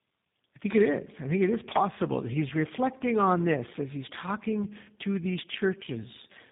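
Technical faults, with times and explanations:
Throughout, tandem speech coding: GSM full rate then G.729A low-rate coding in a row re-encode degraded speech, making it rough, muffled and warbly, with nothing above 3.8 kHz.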